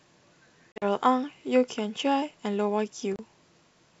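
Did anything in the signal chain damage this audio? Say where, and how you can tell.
Yes. From 0.72 to 0.85 s the speech breaks into hard-edged silent gaps, about 80 ms lost over 100 ms, the longest gap 40 ms. At 3.16 to 3.20 s a shorter 30 ms hole follows. Each gap ends with briefly rough, slightly distorted speech. This is packet loss on an ADPCM call in the network stage, here a G.722 stream at 64 kbit/s. Roughly seven packets, then a few, were dropped and filled with silence, and the decoder's adaptive predictor and step size lost track of the sender's.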